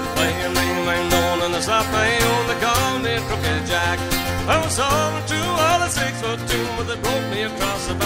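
No dropouts, distortion, level jumps or timing disturbances can be heard at any point; the signal holds steady throughout.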